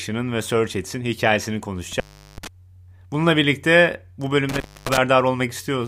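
A loose cable or plug opens twice, an intermittent contact fault, cutting the speech at 1.92–2.47 s for about 380 ms and again at 4.49–4.98 s, just after "birlikte bu", for about 265 ms. Each dropout is edged with crackle, leaving faint hiss in the gap.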